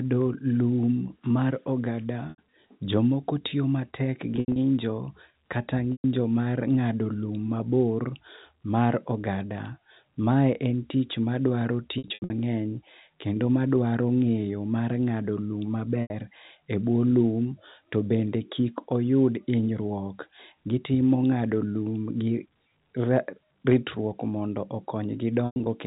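Packet loss with pitch repetition shows up at 2.3, 4.36, 5.92, 11.98 (right after "en tich madwaro"), 16.02 (just before "e buo lum kendo") and 25.46 s. Each time the receiver loops the last pitch period to cover 80 to 220 ms of missing audio, giving a held, buzzy sound that fades into silence on the longer gaps. Between the last two of those, at 23.68 to 23.76 s, there's hard clipping. The peaks overshoot by about 2 dB and get sliced flat, so you hear a quick crackle on that loud moment, heard through narrow telephone-band G.711 coding.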